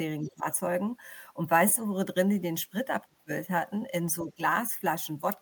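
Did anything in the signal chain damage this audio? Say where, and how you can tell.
Yes. The speech dips sharply at 0.21–0.46 s, 3.09–3.31 s and 4.22–4.40 s, dropping around 20 dB, 25 dB and 10 dB at the deepest. This is speech suppressed in double talk, likely call processing where the echo canceller turned everything down while both ends talked.

A faint second voice sits under the speech from 0.22 to 0.34 s, about 20 dB below it. This is the other side's voice leaking through, likely loudspeaker pickup that the call processing's echo canceller failed to subtract fully from the microphone signal.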